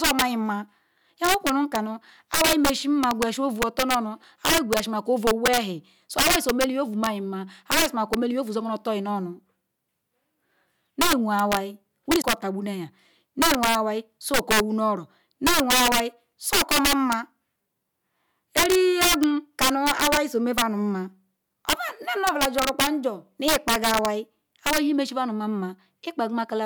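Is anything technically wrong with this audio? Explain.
Yes, this speech has two faults. Integer overflow runs throughout: loud peaks, driven about 9 dB past the limit, wrap to the opposite sign, giving violent cracks that show as sudden sign jumps and broadband vertical streaks. Damaged data in a compressed stream appears at 12.18 to 12.24 s: the decoder misreads corrupt frames and resyncs, producing a brief glitch.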